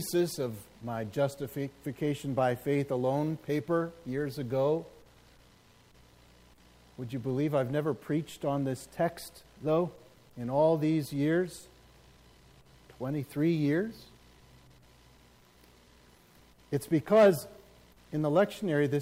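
No technical faults are audible.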